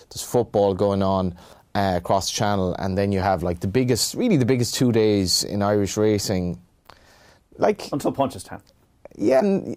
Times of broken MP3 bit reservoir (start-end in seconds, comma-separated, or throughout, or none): 9.39-9.42